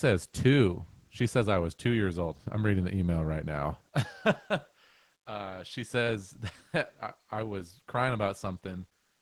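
No faults to report in this speech recording: it went through a WebRTC call path whose coding character and top end, limited at about 12 kHz, fit Opus at around 24 kbps, and nothing beyond that path's ordinary behaviour can be heard.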